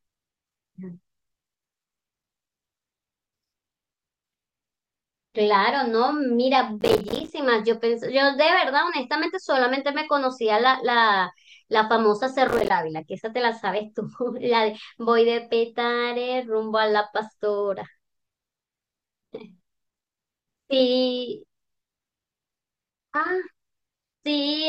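Processor overload crackle at 6.81 to 7.30 s and 12.48 to 12.70 s: short buffers of around 5 ms repeatedly miss their deadlines, leaving silent gaps that tear the speech into gritty crackle.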